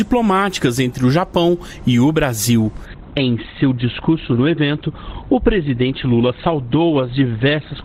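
At 2.85 s the sound abruptly turns dull, with nothing above about 4.4 kHz and coarser artefacts, and stays that way to the end without any gap. This is an adaptive stream at a lower bitrate, consistent with a drop from roughly 64 to 12 kbit/s Opus.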